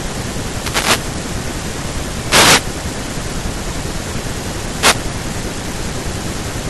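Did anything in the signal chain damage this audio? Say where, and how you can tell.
Yes. Wireless microphone noise hits: the FM radio link faded, letting receiver noise swish over the speech at 0.48–1.17, 2.26–2.65 and 4.79–4.96 s.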